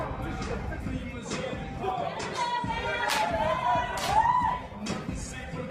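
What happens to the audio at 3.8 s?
At 3.8 s the audio is inside a stretch of adaptive stream at a lower bitrate. It runs from 3.21 s to the end. The stream switched down to a leaner encoding. Quality drops suddenly, with no gap. Codec artefacts rise. The sound fits a fall from about 64 to 16 kbit/s Opus.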